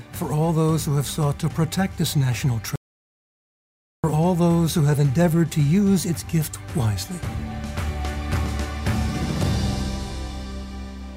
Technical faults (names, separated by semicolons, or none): audio dropout to silence